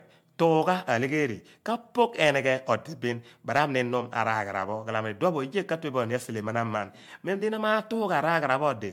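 Generation loss runs throughout this speech. It was likely re-encoded as MP3 about seven times near 105 kbit/s. It sounds swirly and hollow, with blurred attacks.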